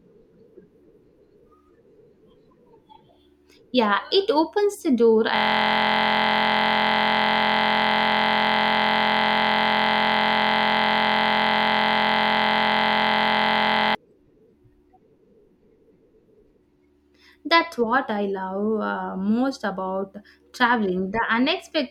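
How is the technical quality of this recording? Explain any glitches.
The recording has one serious glitch. Right after "it opens the door", at 5.36 s, a system hang loop takes over until 13.95 s. The machine froze while the sound hardware kept replaying the same 23.22 ms slice of audio, which fits a 1024-sample buffer, hundreds of times over. With a slice that short, it comes across as a steady buzz at 43.1 Hz.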